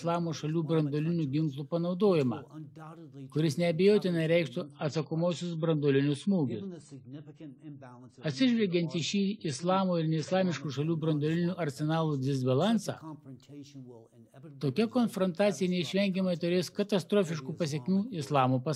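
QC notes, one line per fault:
4.63–10.63 s adaptive stream at a lower bitrate: treble abruptly cut above 9.9 kHz with swirly artefacts, consistent with a drop to roughly 24 kbit/s AAC; sudden switch, no gap.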